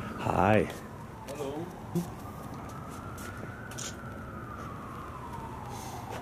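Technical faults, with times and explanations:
0.09 to 6.17 s, periodic USB or driver dropouts: every 64 ms, roughly a millisecond of audio drops to silence as a recurring task stalls the USB bus or audio driver, producing a steady train of about a hundred small ticks wherever signal is present.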